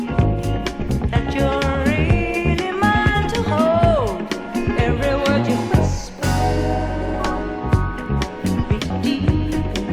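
At 3.14 to 3.17 s the audio jumps forward, and it happens again at 8.76 to 8.79 s. That's compressed frames being skipped: whole chunks never got decoded, so playback leaps ahead, roughly 200 ms the first time and about 400 ms the second. The jumps fit a frame length of 46.4 ms.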